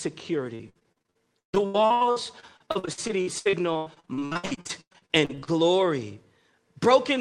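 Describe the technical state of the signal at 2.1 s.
Repeated packet loss (robotic sound) covers 2.1 s, within a stretch from 0.55 to 5.49 s. Dozens of short dropouts, the longest 139 ms, are patched by extending the preceding sound, so roughly 38% of the span is concealed, leaving choppy speech with pieces missing.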